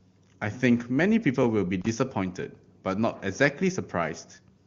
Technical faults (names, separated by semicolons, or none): loose connector crackle